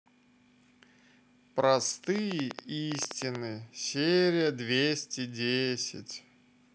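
From 2.16 to 3.36 s a train of clicks, about fifteen uneven pulses near 11 per second, ticks roughly 15 dB above the speech, likely from nearby interference.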